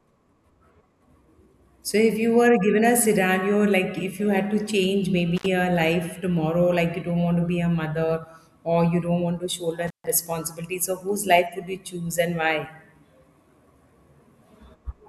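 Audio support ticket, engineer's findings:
Intermittent contact, speech path, two events. Loose cable or plug, likely a worn connector, briefly breaking the signal line. Dropout 5.36–5.46 s, line open about 65 ms, between "you had to change" and "a life tomorrow like". Second dropout 9.87–10.07 s, open about 141 ms, after "don't want to shoulder", before "responsibility so whose". Crackle at make and break, faint hiss during each gap.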